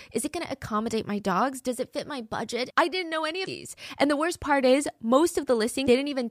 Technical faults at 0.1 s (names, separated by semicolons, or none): none